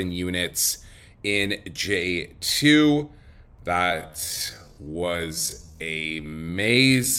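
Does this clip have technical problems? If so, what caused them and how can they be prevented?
Yes. From 3.76 s to the end at 7.19 s there is a time-stretched section. The speech abruptly slows to about 0.54 times its pace and drags. This is likely software lengthening it while keeping pitch by repeating short slices. Unlike slowed playback, the pitch doesn't drop. Prevent it by trimming or re-recording to fit the length rather than stretching audio this far.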